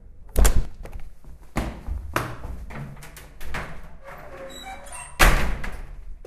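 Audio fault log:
0.65 to 6.27 s, one channel drops out: the sound falls abruptly by about 6 dB at 0.65 s and stays lower to the end, likely because one stereo channel went silent, leaving the mono sum with half the shared material.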